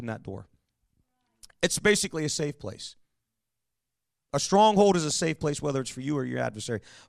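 A speech recording with a brief DAB burbling fault at 5.10 s, between "stronghold is a" and "safe place whether it's". Uncorrected bit errors in the MP2 stream corrupt samples, so individual sub-bands get short noise blips and a few watery blips sit over the speech, consistent with a low error rate under weak reception.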